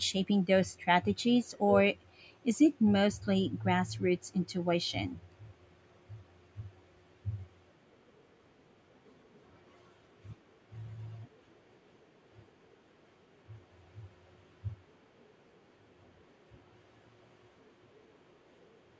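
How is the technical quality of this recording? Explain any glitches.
The recording has one fault, a faint echo leak near the end. It occurs at 13.18–13.22, 13.51–13.56, 14.04–14.22, 14.44–14.53, 14.70–15.36, 15.68–15.99 and 16.17–16.22 s, and from 16.6 s to the end. A copy of the speech returns 398 ms late at roughly 40 dB below it, likely residue an echo canceller failed to remove from a loudspeaker's pickup. On a spectrogram, whose content stops at 8 kHz, it appears as dim, shifted harmonic traces. The waveform barely changes.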